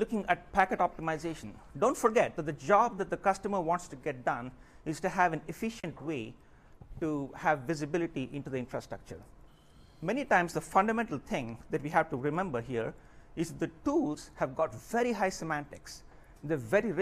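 Nothing in this recording gives itself away as a fault; there's just no dropout, click, glitch or distortion anywhere you could point to.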